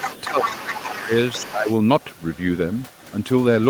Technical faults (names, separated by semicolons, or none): other side's voice leaking through; speech suppressed in double talk